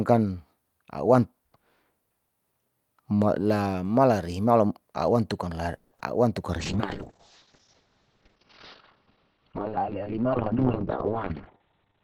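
From 5.77 to 5.92 s a call audio freeze stretches the preceding sound into a fading 140 ms buzz, likely from packets held up in transit. On a spectrogram it shows as smeared, decaying harmonics, and the audio then resumes intact.

At 6.0 s a short concealed packet loss patches about 10 ms with extrapolated sound. It is heard as a brief smear or wobble.

From 6.6 s to the end a call bitrate drop takes the encoder from 48 kbps to 7 kbps. The spectrogram's top edge falls from 20 kHz to 4 kHz, and the sound turns muffled and watery.

From 10.95 to 12.02 s a jitter buffer speed-up trims pitch periods to drain excess delay. The speech runs about 10 percent faster at unchanged pitch, losing roughly a tenth of a second.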